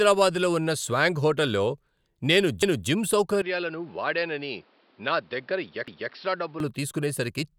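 It's a speech clip with two problems. First, overlapping chunks: at 2.63 s and again at 5.88 s a 250 ms slice plays twice, each time running to about 2.88 s and 6.13 s. You hear a little stutter at each join. The spacing fits chunks about 3 s long, where each new chunk starts a quarter-second before the previous one finished, so the seam gets doubled. Second, from 3.42 s to 6.60 s the sound goes dull and boxy. Nothing comes through above 5.6 kHz, the level drops by a few dB, and a new noise floor sits well below the speech, roughly 35 dB down. There's no gap at either edge, so it just flips over and back. That's likely the input switched to a poorer device, such as a headset in call mode, with its narrower band and its own tone and hiss.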